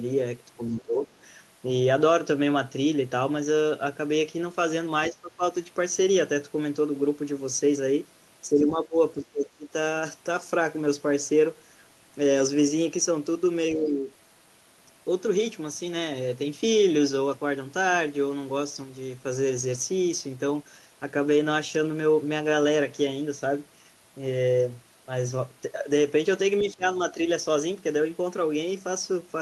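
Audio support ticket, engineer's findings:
Speech suppressed in double talk: talker's speech ducks at 0.57–1.08 s, 5.11–5.43 s, 8.47–8.98 s, 9.18–9.69 s, 13.75–14.1 s and 26.61–27.18 s. Dips run from about 10 dB up to about 20 dB, the deepest at 9.18 s and 26.61 s, with a few hundred milliseconds affected in each window. Likely component: echo canceller or residual-echo suppressor. When both sides talked at once, it failed to separate near-end speech from loudspeaker echo and attenuated both.

Other side's voice leaking through: brief far-end fragment at 26.59–26.63 s, roughly 40 ms, about 20 dB below the talker. It coincides with the suppression onset at 26.61 s. Likely component: echo canceller. Its adaptive filter did not fully cancel loudspeaker pickup during double talk.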